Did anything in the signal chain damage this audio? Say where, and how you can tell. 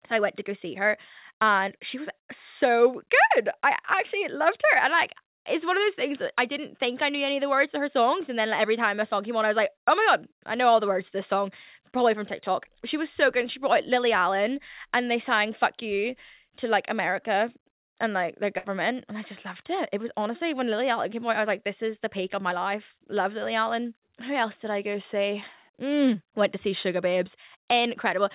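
Yes. A burst of packet loss hits the network stage at 18.58 to 18.66 s. For about 60 ms the receiver keeps repeating the last stretch of speech and fades it, so the sound smears into a held, dwindling buzz or hiss instead of moving on. When the speech returns, roughly 60 ms of it has been skipped. That fits several consecutive packets of the 4 kHz-limited G.711 call stream failing to arrive.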